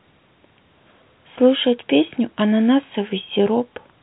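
Speech at telephone bandwidth, with nothing above 3.8 kHz, consistent with G.711 A-law coding at 64 kbps, and no technical fault is audible anywhere in the recording.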